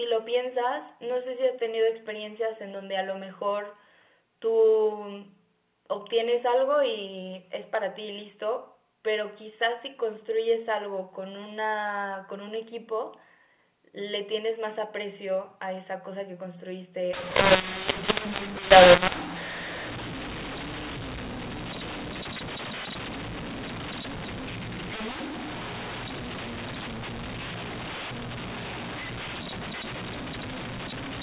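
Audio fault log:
17.13–31.22 s, mu-law and A-law mixed up: from 17.13 s to the end, telephone audio that was coded with A-law is being decoded as mu-law, so each 8-bit code maps to the wrong amplitude. Some levels come out too large and others too small, which makes the speech harsh and distorted, and the quietest samples are lifted well above silence, filling the pauses with noise. Before 17.13 s, the 8 kHz G.711 A-law coding decodes cleanly.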